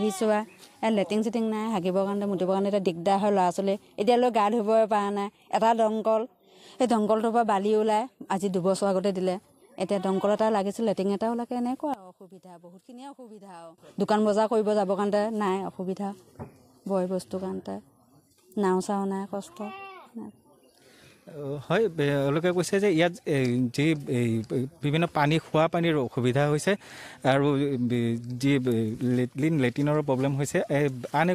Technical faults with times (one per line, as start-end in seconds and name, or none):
11.94-13.78 one channel inverted